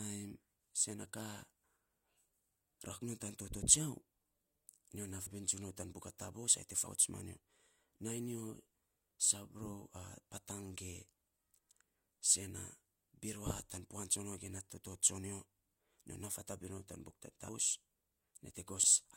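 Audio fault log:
5.26, 6.86, 10.51, 17.49, 18.83 s: compressed frames skipped. At each point the speech jumps ahead by a fraction of a second, which fits several whole 32 ms frames going missing.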